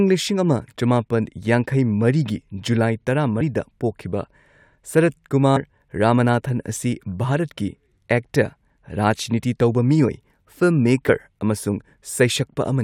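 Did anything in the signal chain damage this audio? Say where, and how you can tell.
Yes, compressed frames were skipped at 3.40, 5.56 and 11.08 s: the decoder dropped two or three 21.3 ms frames each time, and the audio jumps ahead.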